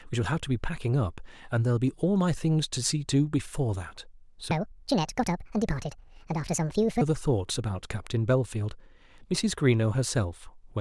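From 4.51 s to 7.01 s a section at the wrong speed runs about 1.59 times too fast, so the speech turns high and hurried, raised by roughly seven semitones, before snapping back to normal. The likely cause is a playback or editing step fitting that stretch to the wrong clock. On a spectrogram the harmonics and formants jump upward and spread apart for that span, while the waveform shows syllables compressed into noticeably shorter, denser bursts.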